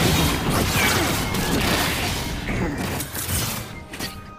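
From start to finish the sound races along at twice its proper pace and sits a full octave too high. This is audio read two samples at a time (double speed): the reader took each pair of samples as a single frame, as if the data had two channels or wider samples, so everything plays at 2x speed.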